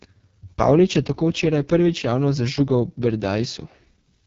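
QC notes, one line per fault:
Throughout: AMR wideband (HD Voice) codec, heavily damaged. The speech sounds rough and raspy, which points to about the codec's lowest 6.6 kbit/s mode. There is nothing above roughly 7.5 kHz, and hiss-like noise stands in for real detail in the top band. This sets it apart from plain low-pass filtering.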